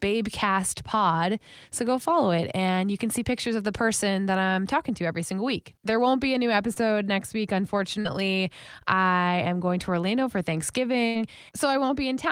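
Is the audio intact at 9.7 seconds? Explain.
Yes, the audio at 9.7 seconds is intact, with no audible fault at that moment.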